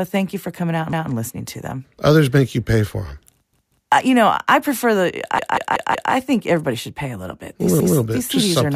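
A repeated buffer occurs four times. At 0.93 s, after "you for coming out", a 186 ms piece plays once more. At 3.53 s, after "you pay for them", it plays twice more. At 5.39 s, after "know I prefer the", it plays four more times, and at 7.80 s once more. New audio arrived late, so the device replayed its last block, which fits an 8192-sample buffer. Each repeat joins hard. Unlike a dropout, no audio is lost: the speech stutters, then resumes intact.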